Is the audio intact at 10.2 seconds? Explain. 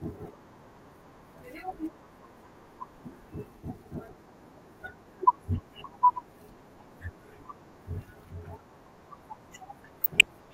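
No. From 10.01 to 10.30 s the speech is broken by DAB burbling: weak reception lets bit errors past error correction, corrupting MP2 samples and scale factors so single sub-bands jump in level frame by frame, giving short blips of noise over the audio.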